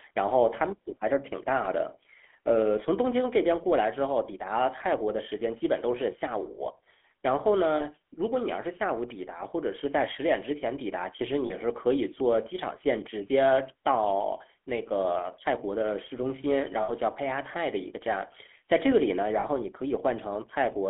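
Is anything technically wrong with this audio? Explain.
Yes. The whole clip carries GSM full-rate codec damage. The coder models the vocal tract and drives it with a sparse, regular pulse excitation, and everything sits in a 200 Hz to 3.4 kHz band, which fits a 13 kbps full-rate stream. The speech sounds plainly buzzy and gravelly.

There are also lost GSM frames at 7.76–7.86 s, 11.46–11.53 s, 16.82–16.9 s and 19.4–19.46 s, each about 40 ms except the 60 ms one at 16.82 s. The decoder repeats the last good frame, so each gap turns into a short, rough metallic ring.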